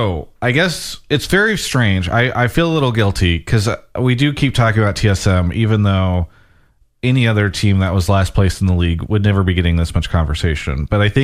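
A speech recording with nothing technically wrong with it.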